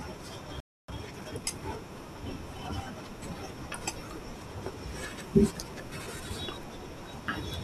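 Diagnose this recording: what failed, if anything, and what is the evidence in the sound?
Playback stall at the playback stage: the speech drops to silence from 0.60 to 0.88 s, a 282 ms gap, likely the player's buffer running dry.

Time-compressed catch-up at the playback stage: from 0.88 to 1.44 s the speech runs 1.5 times fast at normal pitch while the player trims its backlog.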